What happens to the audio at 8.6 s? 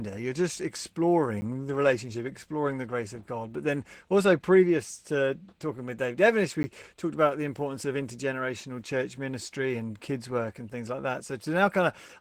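At 8.6 s you're hearing the Opus voice compression that runs through the whole clip. The speech sounds hoarse and a bit robotic, pointing to a low bitrate around 16 kbps, where the linear-prediction core codes the excitation coarsely and a thin layer handles the top band.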